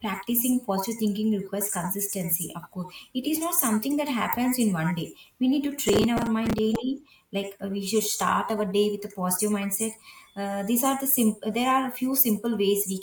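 A speech recording carries a burst of processor overload crackle from 5.89 to 6.76 s, starting just after "need to". Across that stretch the processing repeatedly missed its deadlines, and each late buffer was filled with stale audio rather than silence, so hard-edged repeats pile up into a gritty tearing over the sound. The grain of the crackle points to buffers of about 5 ms, with something like twenty missed, and it stops once the load eases.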